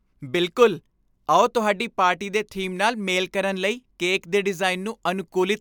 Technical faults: none

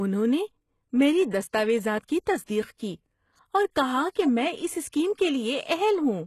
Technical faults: HE-AAC compression

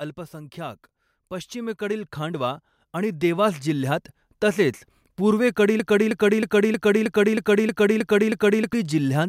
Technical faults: automatic gain rising; broken-record loop

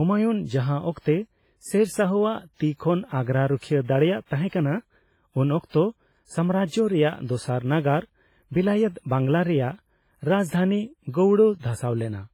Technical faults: WMA compression; pre-echo

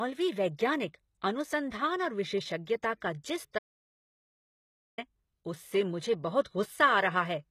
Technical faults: HE-AAC compression; audio dropout to silence

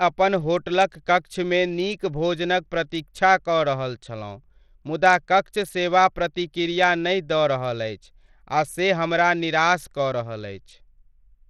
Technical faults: Bluetooth SBC compression

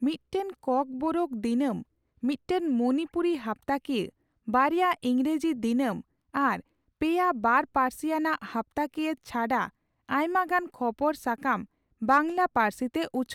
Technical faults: none

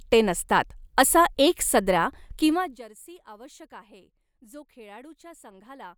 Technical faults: zipper noise

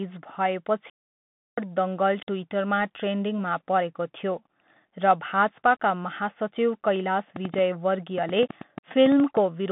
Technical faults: Bluetooth CVSD headset codec; playback stall; train of clicks

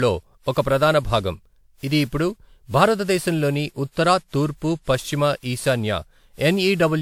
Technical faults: generation loss

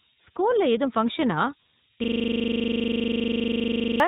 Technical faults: low bit depth with noise shaping; iLBC codec; system hang loop

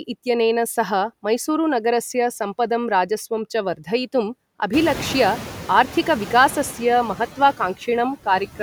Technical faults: noise suppressor artifacts

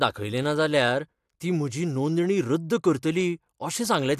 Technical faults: none

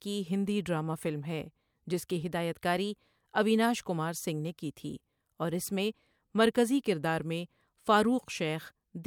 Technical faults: none

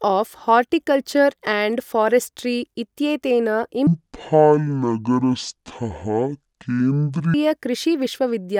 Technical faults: section at the wrong speed

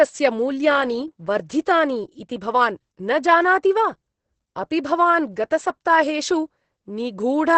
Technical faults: Opus voice compression

